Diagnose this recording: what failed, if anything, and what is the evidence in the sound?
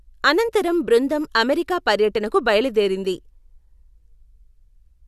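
Nothing failed in this recording, and the sound gives no evidence of any fault.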